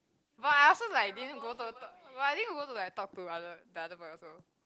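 All through the speech you get Opus voice compression, the hybrid kind, with a low budget (sounds like roughly 16 kbps) leaving the voice hoarse, slightly robotic and smeared up top.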